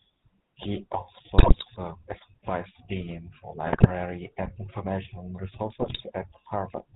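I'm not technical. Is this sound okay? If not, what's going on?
No, not quite. The whole thing has the GSM full-rate codec sound of an old mobile phone call: buzzy, gravelly, with nothing crisp up top. On top of that, GSM bit errors make the voice squawk and gargle briefly at 1.38–1.65, 3.66–3.91 and 5.80–6.01 seconds, where garbled data scrambled the sound.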